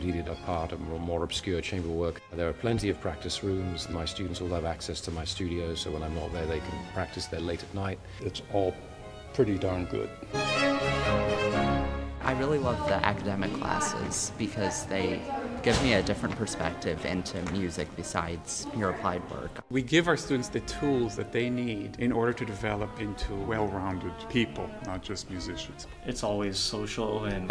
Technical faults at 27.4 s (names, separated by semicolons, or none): none